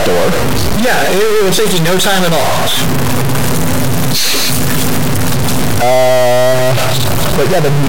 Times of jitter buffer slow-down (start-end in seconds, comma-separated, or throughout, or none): none